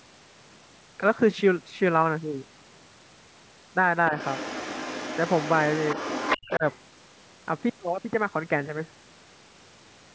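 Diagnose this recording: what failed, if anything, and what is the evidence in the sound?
Other side's voice leaking through, 4.18 to 6.56 s, and a brief scrap at 6.72 to 6.77 s. A second voice sits under the speech, roughly 10 dB down in the long stretch and far fainter later. In call processing, the echo canceller likely left loudspeaker pickup in the microphone signal.

Speech suppressed in double talk, 6.57 to 6.64 s, between those two leaks. The talker's level dips by roughly 10 dB for about 70 ms. This is call processing again: the echo canceller, likely unable to separate the talker from the echo, turned both down.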